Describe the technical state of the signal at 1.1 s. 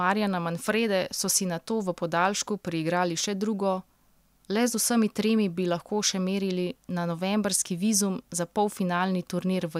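At 1.1 s the signal is intact, with no dropout, clipping, distortion or other audible fault at that moment.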